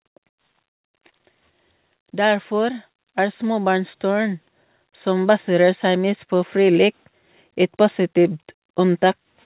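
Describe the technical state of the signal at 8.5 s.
At 8.5 s the speech is intact, carried through the call path's G.711 mu-law coding with its usual band limit at 4 kHz and no fault present at that moment.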